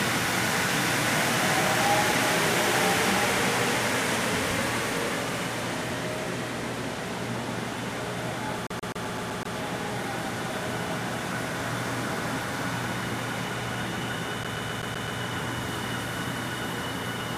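At 8.67 s the sound catches on a CD stuck on one turn, replaying the same 0.13 s slice seven times until 9.56 s. It happens again from 14.44 to 15.2 s with six repeats. The laser is thrown back a track by a scratch on each rotation, and a brief mute marks every jump. The steady, machine-even repeat rate and those tiny silences set it apart from an irregular buffer glitch.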